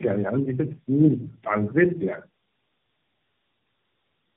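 Throughout, tandem speech coding makes the speech rough, muffled and warbly, as if re-encoded through several narrowband codecs; a spectrogram shows nothing above 3.2 kHz.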